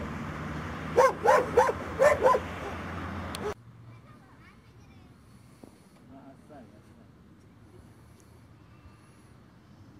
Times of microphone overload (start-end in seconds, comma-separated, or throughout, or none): none